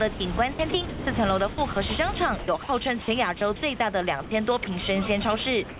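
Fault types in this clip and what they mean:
Sound chopped by the voice detector: Between 0.14 and 1.76 s, and again between 2.39 and 4.67 s, about 420 ms and 390 ms of sound turn to even hiss. This is likely the sender's detector gating quiet parts. The waveform shows abrupt flat gaps, and the spectrogram shows smooth, featureless noise patches below 4 kHz.
Sound dropped by the voice detector: The last 110 ms, from 5.69 s to the end, gives way to steady comfort noise, likely because the detector mistook the sound for background. The waveform ends on a low, flat band, and the spectrogram shows uniform, structureless noise.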